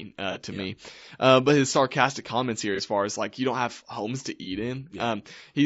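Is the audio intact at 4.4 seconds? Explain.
No. From 4.43 to 4.48 s there is AAC frame loss with concealment. About 30 ms of audio, which fits a single lost frame, was rebuilt by the decoder from the last good spectrum. It sounds like a brief smeared, noisy patch rather than a click or a hard gap to silence, which separates it from a dropout.

Under it runs a plainly audible rough, grainy texture with noise between the harmonics and a thin, synthetic top band, likely from low-delay AAC compression (AAC-ELD) at a rate that fits about 32 kbps. Unlike the concealment patch, this coloration is constant rather than confined to one instant.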